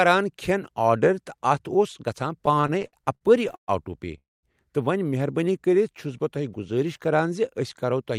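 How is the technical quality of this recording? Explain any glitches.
The recording has four network-related timing glitches, between 2.4 s and the end of the clip. Each one stretches, pauses or squeezes the speech rather than losing it.

From 2.41 to 3.70 s there are repeated stalls (stutter): thirteen short hitches, the longest 128 ms. Packets kept arriving late or too slowly, so the jitter buffer emptied again and again, and each time the receiver extended the last sound until data returned. About 358 ms was filled this way, 28% of that stretch, and nothing is missing. The speech drags and catches. What separates it from a single freeze is the rapid series of small stalls.

From 4.18 to 4.45 s a call audio freeze interrupts the speech. About 250 ms is filled: a brief held continuation of the last sound, then roughly 200 ms of silence, before the speech resumes exactly where it stopped. 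The likely cause is packets held up in transit, which drained the buffer and added about 250 ms of delay. Unlike the stutter, this is one longer hold, and it goes quiet rather than catching repeatedly.

From 5.45 to 5.91 s a jitter buffer slow-down plays the speech at about 93% speed. To rebuild its reserve, the receiver repeated single pitch periods, adding 41 ms. The pitch stays the same, but sounds are drawn out. There is no gap or pause, which separates this from the stall-type faults. The speech simply moves more slowly.

From 7.74 s to the end of the clip, a jitter buffer speed-up runs the speech at about 110%. The buffer held more audio than its target, so the receiver trimmed short pieces of one or a few pitch periods, around 50 ms in total. Pitch is unchanged, but the delivery sounds hurried. This is the mirror image of the earlier slow-down: tempo rises instead of falling.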